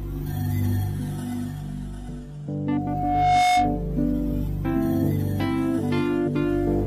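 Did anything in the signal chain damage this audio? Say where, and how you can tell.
Yes. Loudspeaker feedback squeal runs from 2.72 to 3.83 s in the acoustic and analogue stage. A pure 724 Hz tone swells over most of a second until it sits about 5 dB above the sound. The microphone is re-amplifying its own loudspeaker, with loop gain above one at that frequency.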